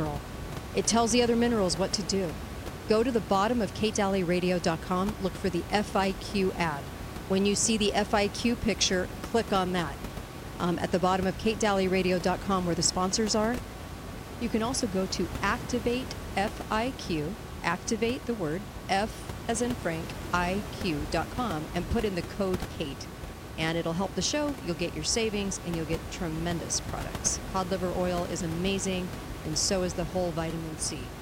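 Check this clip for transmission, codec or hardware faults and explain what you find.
No transmission, codec or hardware fault can be heard in the speech: the signal holds steady throughout, and the only thing beneath it is the recording room's own background noise, sitting about 10 dB below the voice.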